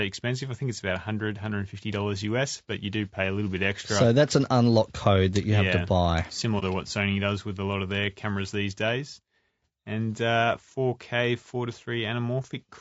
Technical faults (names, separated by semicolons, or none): low-delay AAC compression; AAC frame loss with muting